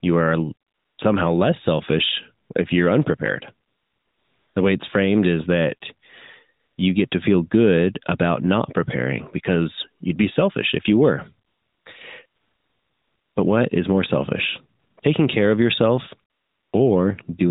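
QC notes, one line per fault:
0.68–16.74 s, AMR comfort noise: eleven gaps where the phone judged the talker silent, stopped sending speech frames, and the receiver synthesized smooth, steady noise from a rough level-and-spectrum description. They range from 20 ms blips to 1.1 s at 12.26–13.36 s. The first ends just before "somehow less selfish if", and an 0.88 s stretch follows "selfish if you're unprepared". The real background drops out and flat noise switches in around the narrowband, lightly coded speech.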